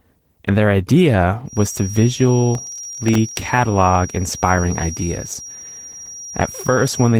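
Opus voice compression runs through the whole clip. The speech is muffled and slightly hoarse, with a faintly robotic edge. That fits hybrid coding at around 16 kbps: SILK linear prediction carries the lower band, while a thin CELT layer covers everything above 8 kHz only coarsely.

From 1.44 s, just after "their idea", a feedback whistle sets in and lasts to the end. It is a thin, steady tone near 5.7 kHz, about 15 dB below the speech, swelling and fading slowly in level. The likely cause is a loudspeaker-to-microphone loop held right at the edge of feedback.

Between 2.55 and 3.48 s, processor overload crackle rides over the speech as a gritty tearing. About thirty audio deadlines are missed in quick succession, and each missed block drops to silence with hard edges. The density of the gaps fits very short buffers of around 1.5 ms.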